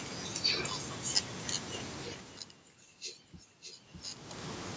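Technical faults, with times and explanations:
2.29 to 4.13 s, doubled audio track: a second full-band copy of the speech trails roughly 0.7 s behind, a few dB quieter. It has no decay or room colour, and it starts and stops abruptly. This is likely a second capture through a slower path, or an edit holding two copies out of step.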